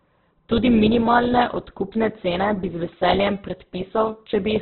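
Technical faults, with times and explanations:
Throughout, Opus compression: the speech sounds dull, grainy and rough, with nothing above 4.1 kHz. This is likely the Opus codec in CELT mode at a low rate, which fits about 8 kbps. It narrows the band and fills starved bands with noise.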